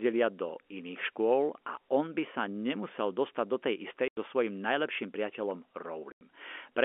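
At 4.08 s, the speech drops out for 90 ms. It happens again at 6.12 s, also for 90 ms. This is packet loss filled with silence. Packets never arrived, and the receiver played silence in their place. Each gap fits three lost 30 ms packets. Both holes have hard edges.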